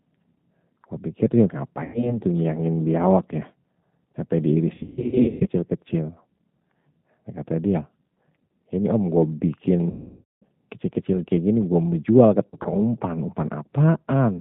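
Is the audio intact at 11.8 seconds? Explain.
No. At 11.8 seconds the speech carries G.729 codec damage, as it does for the whole clip. The sound points to a low-rate voice codec around 8 kbit/s. This codec does not store the waveform. It rebuilds speech from a vocal tract model, a pitch predictor and a few pulses per short frame. Nothing above 4 kHz survives, so the speech sounds muffled. The damage is plainly audible here, with a rough, synthetic buzz.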